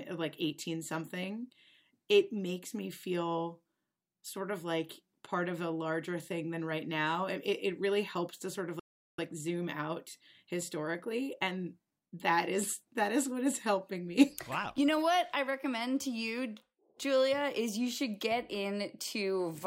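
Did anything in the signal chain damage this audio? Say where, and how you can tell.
Yes. In the playback stage the player likely ran out of buffered data or had its output thread blocked, causing a playback stall. The speech breaks off right after "helps to sort of" at 8.79 s and stays silent for 390 ms, resuming at 9.19 s.

The player then worked off its backlog with time-compressed catch-up, snipping out short segments and cross-fading the joins. From 9.19 to 12.19 s the speech runs 1.1 times fast at unchanged pitch, returning to normal pace before "is that is what".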